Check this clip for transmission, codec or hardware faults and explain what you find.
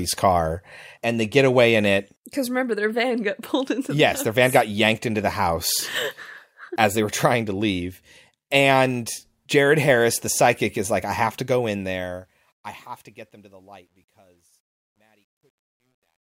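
One fault, riding on the fade-out that starts around 11.4 s.

Truncation distortion on the fade runs from 11.40 s, just after "is like I have", to 16.29 s. The fade is undithered and stepped, fitting about 11 bits. It turns gritty, worst from 13.12 s. Unlike packet dropouts, the breakup worsens as the level falls.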